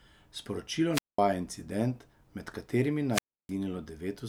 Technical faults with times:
0.92-1.20 wireless microphone squelch dropout
3.12-3.51 wireless microphone squelch dropout

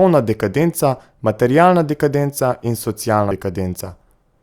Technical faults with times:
3.31 compressed frames skipped

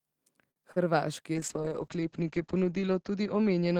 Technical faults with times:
0.51-0.58 short stall from a late packet
0.72-0.78 short concealed packet loss
1.35-3.80 call bitrate drop

